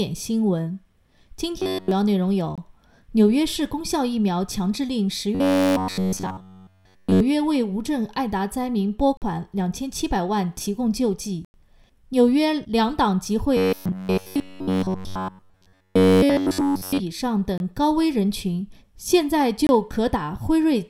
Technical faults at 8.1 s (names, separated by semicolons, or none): none